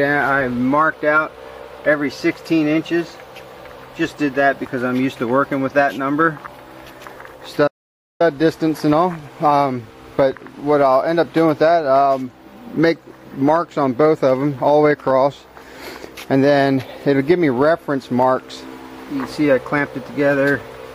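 At 7.68 s the sound cuts off abruptly, and digital silence holds until 8.20 s: an audio dropout to silence lasting about 0.53 s, with no room tone underneath. The input was likely lost while the recorder kept writing zeros. The waveform shows a flat line and the spectrogram a blank vertical band.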